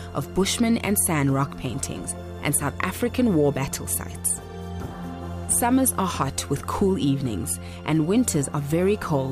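Nothing in this audio stands out as a technical fault, so there's nothing here to flag.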